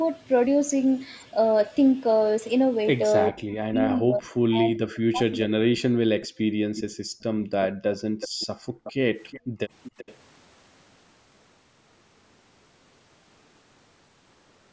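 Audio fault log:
3.29 to 6.28 s, speech suppressed in double talk: while both ends were talking at once, the talker's voice sinks, thins and breaks up in pieces for around two seconds in total, falling by as much as about 40 dB at its lowest. This is likely the echo canceller failing to tell the near talker apart from the loudspeaker echo and pulling down everything it hears, so the wanted voice is attenuated along with the echo.
6.21 to 6.28 s, 6.76 to 6.82 s, 7.62 to 8.92 s, 9.28 to 9.40 s and 9.83 to 10.15 s, echo leak: a faint, delayed copy of the voice returns about 367 ms late, and about 387 ms late in the last instance. It sits roughly 15 to 25 dB below the direct speech, appearing as short scraps and one longer stretch of over a second. The likely cause is a far end playing the call on a loudspeaker whose echo canceller let part of the microphone pickup through and sent it back.
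6.56 to 8.84 s and 9.40 to 9.59 s, background gated by the echo canceller: the room sound drops away sharply, by about 40 dB in the first stretch and about 28 dB in the second, then comes back. The first stretch lasts around one and a half seconds, and the second is only a brief moment. The canceller clamped the microphone down hard while the loudspeaker was active and released it afterwards, which leaves these holes in the background. Throughout the clip, the call's microphone processing band-limits the audio to nothing above 8 kHz.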